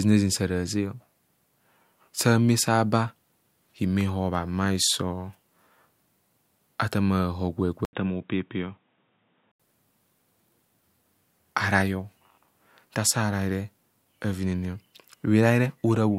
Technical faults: input switched to a poorer device

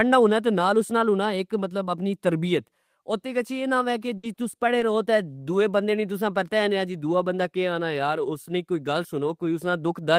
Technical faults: repeated packet loss (robotic sound)

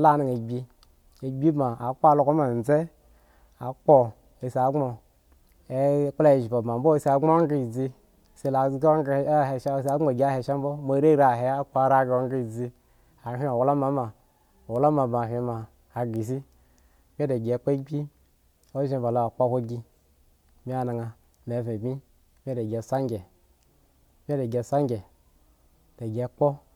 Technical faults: bit error spike

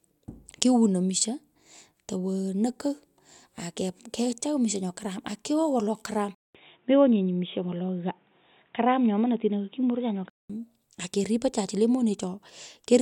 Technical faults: input switched to a poorer device

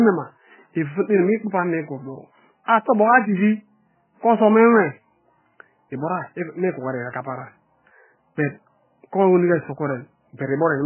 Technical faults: MP3 compression

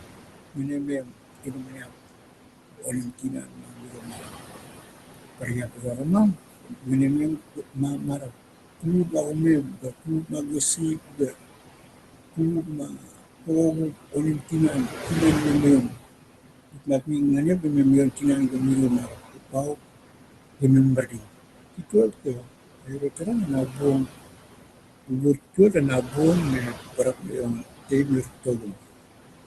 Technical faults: noise suppressor artifacts; speech cut by the noise suppressor

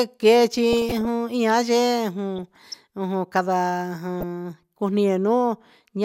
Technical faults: DAB burbling

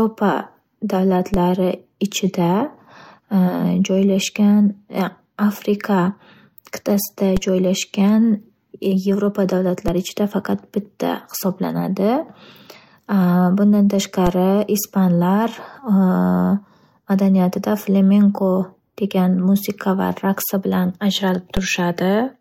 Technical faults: DC step

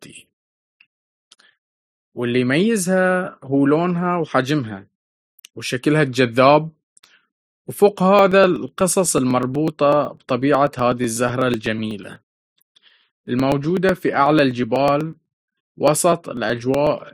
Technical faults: periodic USB or driver dropouts

